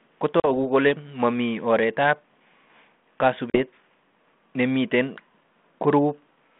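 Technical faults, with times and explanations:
0.40–0.50 s and 3.50–3.59 s, packet loss on an ADPCM call: about 40 ms of audio, a couple of packets, drops to hard-edged silence. Speech then returns with slight distortion while the mismatched adaptive predictor and step size resynchronise.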